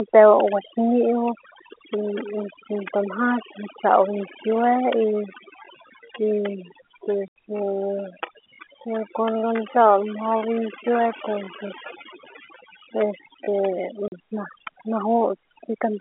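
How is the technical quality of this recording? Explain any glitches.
The recording has three separate faults: heavy-handed noise reduction throughout, a slowed stretch in the middle, and two short dropouts, all over a telephone line that passes roughly 300 Hz to 3.4 kHz.

Overdone noise removal runs through the whole clip. A noise reduction stage set too aggressively pushes individual frequency bands down whenever they sit near its noise estimate, taking the softer parts of the voice with them. The background drops and breaks up into twinkling specks.

From 4.92 s to 13.52 s there is a time-stretched section, most likely software resizing that portion to fit a length by repeating short pieces. The pace drops abruptly to about 0.67 times normal speed while the pitch holds steady.

Packet loss filled with silence cuts the audio twice. At 7.28 s about 80 ms vanishes, and at 14.08 s about 40 ms, which fits 20 ms packets going missing with the receiver playing silence in their place. 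Each gap is a hard-edged hole in the speech.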